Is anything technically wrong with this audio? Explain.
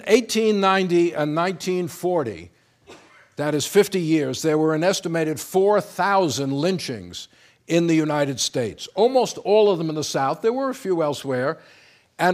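No, nothing technically wrong can be heard in this audio. None of it calls for a fix.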